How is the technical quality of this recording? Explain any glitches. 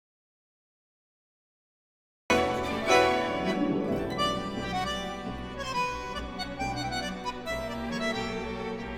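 The recording opens with an audio dropout to silence, running from the very start to about 2.3 s. The input was most likely lost for that stretch, through a disconnected device, a broken link or an accidental mute, while the recorder kept writing silence. The result is dead silence with no room tone or background at all, and then the sound arrives abruptly already in progress. Whatever occurred before 2.3 s is missing.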